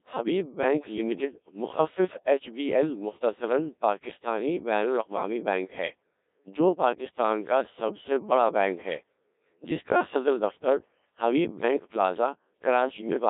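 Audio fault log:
throughout: Codec 2 vocoder. The speech is rebuilt from sine waves rather than passed through as a waveform. Only pitch, voicing, energy and a coarse spectral envelope survive, so the voice comes out robotic and buzzy, with heavy smearing of consonants and detail. The sparse, rigid texture fits a bitrate near 1.3 kbit/s. The band is confined to roughly 200 Hz to 3.7 kHz, which gives the thin, radio-like colour.
12.81 to 13.01 s: bit errors on digital voice radio. For about 0.2 s the synthetic voice lurches in pitch, level and tone colour and briefly dissolves into warbling, bleepy gibberish. Because every bit in so low-rate a stream steers a whole frame's parameters, a scattering of flipped bits, on the order of a few percent, garbles entire frames at once. The length of the burst suggests a handful of corrupted frames.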